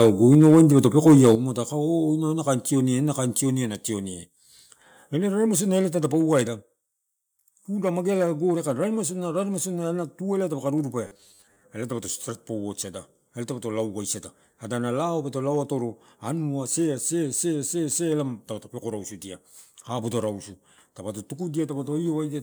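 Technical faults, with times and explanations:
0.00–1.35 s, microphone overload: peaks run about 5 dB past the converter's limit and a few percent of samples are flattened, giving a harsh crackle, likely from excessive input volume.
0.35 s, 1.35 s and 3.39 s, microphone volume stepped down: level drops abruptly by about 2, 8 and 2 dB, likely automatic gain reduction reacting to the overloaded peaks.
11.07–11.63 s, robotic sound from repeated short buffers: just after "tu eh dapaka rurupea", roughly half the audio is repeated, producing a rigid 100 Hz buzz that fits a 10 ms buffer, likely from audio arriving too seldom.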